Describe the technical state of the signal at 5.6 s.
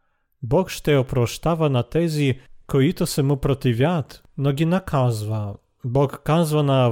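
Nothing has gone wrong at 5.6 s; the speech there comes through intact, with no dropout, click, distortion or other disturbance.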